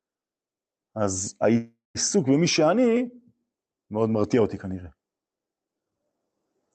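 From 1.57 to 1.97 s the speech stalls into a fading buzz or hiss and then about 170 ms of silence, before resuming exactly where it stopped with nothing lost. This call audio freeze is likely from delayed packets emptying the jitter buffer, pushing everything after it about 375 ms later.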